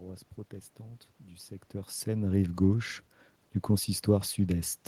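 No technical fault can be heard anywhere in the recording. The room's background noise sits underneath, and around one and a half seconds the speech level shifts as the talker moves relative to the microphone, which is a natural change at the source.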